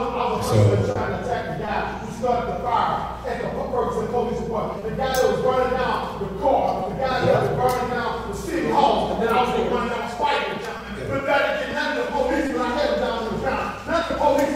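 Short concealed packet loss occurs six times in this audio: at 0.91–0.97 s, where about 40 ms was missing, and at 1.65–1.69, 4.79–4.83, 6.83–6.87, 10.77–10.81 and 12.47–12.51 s, each 20 ms. The decoder bridged every hole by extending the preceding sound and then crossfading back, so each spot is a brief smear or wobble rather than the hard silent gap or click of an unconcealed dropout.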